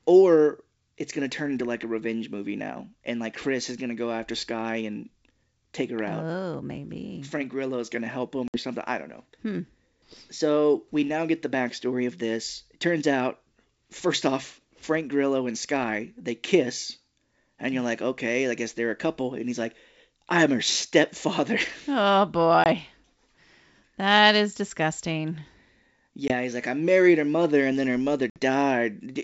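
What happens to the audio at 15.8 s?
At 15.8 s nothing goes wrong: the speech carries straight through, with the wideband telephone coding doing no more than its usual faint work on the sound.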